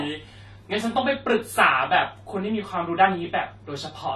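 Across the whole speech clip the sound is dull and carries a plainly audible warbling, fizzy texture, likely from AAC compression at a low bitrate, perhaps around 32 kbps. Unlike a simple low-pass filter, AAC at low bitrates leaves spectral holes that shift from frame to frame.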